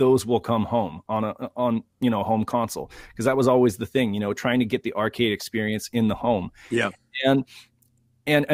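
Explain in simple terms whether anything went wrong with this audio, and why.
Nothing went wrong here.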